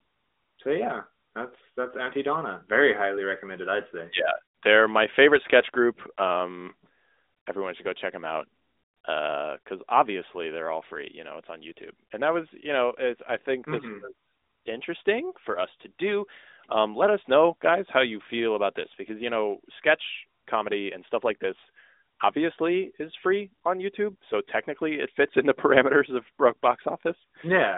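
No faults found: the speech carries the narrowband character of an AMR-NB mobile link, with a phone-line band of roughly 250 Hz to 3.7 kHz, nothing above 3.8 kHz, and only light coding texture consistent with the codec's top 12.2 kbps mode.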